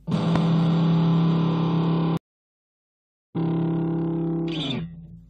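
A sharp pop stands out from 0.36 to 0.38 s, a single transient peaking around 15 dB above the surrounding sound, which carries on beneath it. This loud pop is likely an electrical step or pulse, from a plug, switch, static or driver glitch, entering the signal path.

At 2.17 s the audio drops into silence for about 1.18 s and returns at 3.37 s roughly a second further on, with material skipped. This is a stream reconnect: the connection broke, playback stalled, then a fresh decoder rejoined the stream mid-flow.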